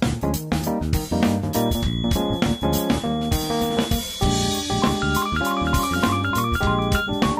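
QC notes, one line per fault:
1.48 s to the end: feedback whistle. A thin, steady tone at 3.4 kHz sits about 15 dB under the sound and swells and fades slowly in level. A loudspeaker-to-microphone loop likely hovers at the edge of feedback, sustaining one frequency without running away.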